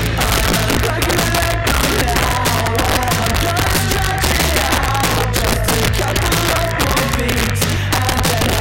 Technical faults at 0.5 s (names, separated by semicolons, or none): integer overflow